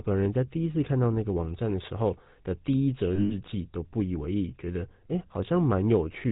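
Throughout the clip, the speech carries the buzz and gravelly roughness of the GSM full-rate codec. This fits a 13 kbit/s coder that models the vocal tract and excites it with sparse, regular pulses. Nothing above 4 kHz survives, and the damage is plainly audible.

From 3.14 to 3.34 s, lost GSM frames break the sound. About 140 ms of frames are missing, scattered across 160 ms, and the longest gap lasts about a tenth of a second. The decoder fills each gap by repeating the last good frame. The result is a rough, metallic ring.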